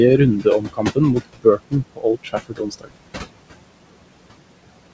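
Throughout, the background pumps down between phrases and swells back under the speech. These are noise suppressor artifacts: the room noise, sitting about 13 dB below the speech, is pulled down by about 21 dB frame by frame.

From 0.41 to 0.98 s, parts of the speech sound swallowed, dropping by up to about 16 dB for roughly a third of a second in all. From 1.25 to 2.92 s the effect is stronger, fading parts of the speech by up to about 21 dB for roughly 0.7 s. Both are speech cut by the noise suppressor, which mistook quiet speech for noise.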